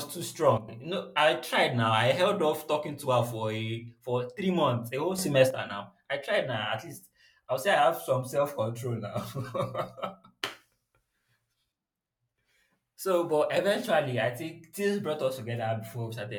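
Speech with two sudden gain jumps: level and background noise drop about 10 dB at 0.58–0.68 s, then rise about 7 dB at 5.18–5.50 s after "three months a whole", likely unramped digital gain changes.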